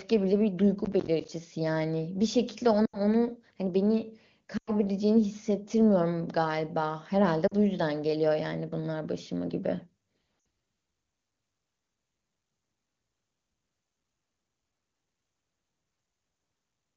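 From 0.85 to 1.29 s a burst of processor overload crackle tears through the speech. Roughly ten audio buffers of about 10 ms each missed their deadline and were replaced by silence, leaving hard-edged gaps. That rapid clicking grit, rather than a smooth fade, is what separates it from packet loss.

Lost AMR speech frames follow at 2.85 to 2.97 s (four frames, 80 ms), 4.57 to 4.71 s (five frames, 100 ms), 7.47 to 7.54 s (two frames, 40 ms) and 10.39 to 10.45 s (three frames, 60 ms). In each gap the decoder repeats the last good pitch and vocal tract settings at falling gain. The sound smears and fades softly instead of clicking. The wideband coding around these dropouts sounds clean, which fits a high AMR-WB rate such as 23.85 kbit/s.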